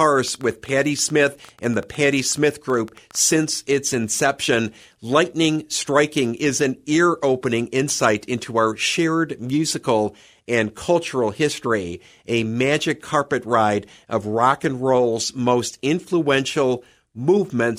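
From the start to about 3.44 s, a train of clicks, about eight per second at an uneven pace, ticks over the speech, roughly thirty in all, peaking near the speech level, likely from nearby equipment interference. Spectrograms show thin vertical broadband lines; waveforms show sharp spikes.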